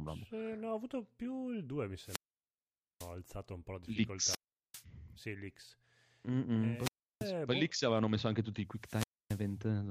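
Four wireless microphone squelch dropouts, at 1.99–3.15, 4.23–4.84, 6.75–7.32 and 8.73–9.58 s: the radio link fades, hiss rises, then squelch mutes for 850, 390, 330 and 270 ms.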